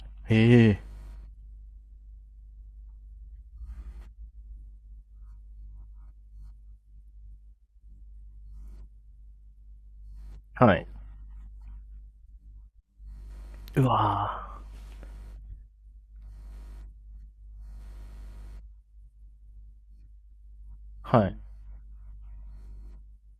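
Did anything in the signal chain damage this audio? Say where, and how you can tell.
No, none of the stages between capture and playback left an audible mark on this speech recording. Nothing in it points to a fault at any point along the chain.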